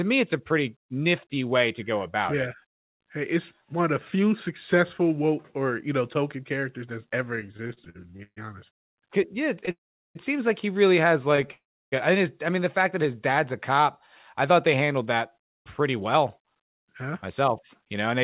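From 7.36 s to 11.51 s the speech keeps catching and dragging, with about 20 brief hitches, the longest around 136 ms, filling roughly a tenth of that stretch. These are repeated stalls (stutter): packets arrived late or too slowly, so the jitter buffer kept running dry, and the receiver stretched the last sound each time before carrying on. Nothing is lost, but the flow is broken into jerky fragments.

Inside and just after that passage come three longer dropouts: 8.72–9.00 s, about 0.24 s and almost entirely silent; 9.71–10.18 s, about 0.44 s with around 0.4 s of silence; and 11.52–11.95 s, about 0.4 s with roughly 0.32 s silent. Each is a brief smear of the last sound fading into nothing, after which the speech resumes exactly where it stopped. The likely cause is a call audio freeze, where held-up packets emptied the buffer and a gap was inserted without removing any speech.

From 14.51 s to 18.12 s the speech sounds slightly hurried, running at about 105% of normal speed while the pitch stays the same. 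This is a jitter buffer speed-up. The buffer was holding too much audio, so the receiver trimmed many tiny pitch-period slices, removing about a fifth of a second in total, to bring the delay back down. Throughout, the call codec passes nothing above 4 kHz, which fits 64 kbps G.711 mu-law.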